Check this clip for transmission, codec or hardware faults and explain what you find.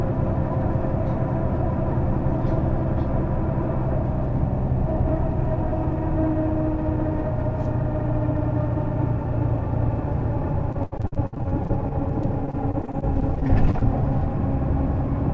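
One transmission fault stands out: a choppy, robotic stretch from 10.72 s to 13.83 s. Over those three seconds the audio breaks up about 30 times, with a stuttering quality and bits of sound dropping out. This is repeated packet loss. Packets kept arriving lost or late, and each hole, the longest 66 ms, was patched by stretching the previous sound. About a fifth of the stretch is synthetic fill, and the fill can't fully cover the gaps. The band-limit at 8 kHz fits a wideband call codec such as G.722.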